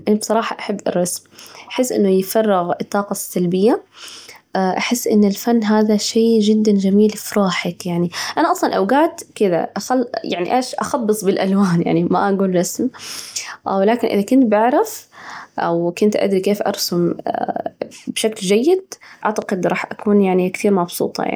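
At 19.42 to 19.44 s, just before "راح أكون", a single loud pop cuts through the speech, a sharp click that peaks a few decibels above the surrounding level while the talking carries on beneath it. The likely cause is a brief voltage step or pulse, from a plug, switch, static discharge or driver glitch, entering the signal chain. On a waveform it appears as one tall, narrow spike; a spectrogram shows a thin vertical stripe spanning the full frequency range.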